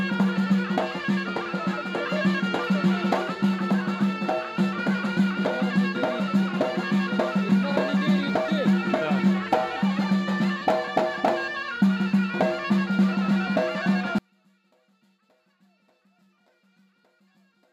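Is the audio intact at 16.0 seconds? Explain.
No. At 16.0 seconds you're inside a stretch running from about 14.18 s to the end at 17.73 s where the sound collapses by about 40 dB. It's most likely one channel inverted: one side's polarity is flipped, so whatever both channels share cancels when they're summed to mono. What survives is just the small difference between them, a faint ghost of the audio rather than the real thing.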